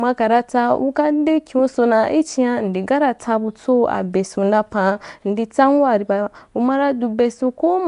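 From start to finish the speech carries a rough, hissy halo and a smeared, underwater quality, with the damage plainly audible. The likely cause is Nellymoser compression, the old Flash microphone codec, at a rate that fits around 44 kbps: each block gets a fixed bit budget, so weak bands are dropped and refilled with noise. On a spectrogram, nothing appears above 10.6 kHz, and the upper bands look grainy and speckled rather than cleanly harmonic.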